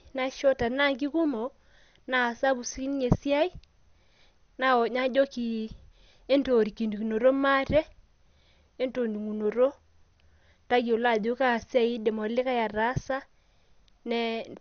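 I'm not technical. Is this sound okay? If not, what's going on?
No. From start to finish the speech sounds dull and muffled, as if heard through a wall, with a gurgling, grainy roughness clinging to it. Nothing is heard above about 6.5 kHz, so the crisp upper detail is missing. The likely cause is MP2 compression squeezed too hard. This older format splits sound into many narrow slices and shares out a small data budget, so upper slices get switched off entirely and the rest are stored roughly.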